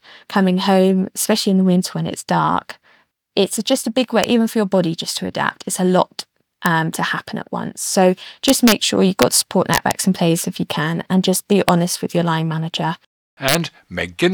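Speech with integer overflow cracks at 4.24, 6.66, 8.48–8.72, 9.22, 9.74–9.91, 11.69 and 13.49–13.55 s: peaks up to about 4 dB past full scale wrap to the opposite sign rather than limiting, showing as full-height jumps on the waveform and broadband vertical streaks on a spectrogram.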